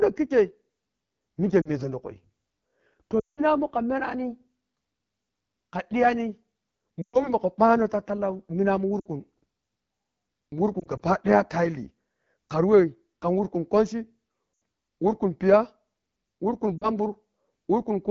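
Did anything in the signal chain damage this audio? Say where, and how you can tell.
Yes. The damage is at the codec stage. The audio was carried through the AMR wideband (HD Voice) codec, and the damage is plainly audible across the whole clip. The speech has a rough, raspy texture, which fits AMR-WB's low 8.85 kbit/s mode. At that rate, the pulse excitation and vocal tract model below 6.4 kHz are coded too coarsely, and only synthetic shaped noise fills the band above it.

Lost AMR speech frames on the radio or network link add brief dropouts. These occur at 1.61 to 1.70 s (40 ms), 3.19 to 3.43 s (180 ms), 7.02 to 7.34 s (120 ms), 8.99 to 9.07 s just after "ta tallani minamun" (60 ms), 14.53 to 14.61 s (80 ms) and 16.78 to 16.89 s (40 ms). From 10.79 to 11.01 s, three isolated 20 ms losses are scattered over 200 ms. For each missing frame, the decoder repeats the last good parameters at falling gain, so longer gaps sink toward near silence within two frames. 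The speech then resumes weak or rough for a moment.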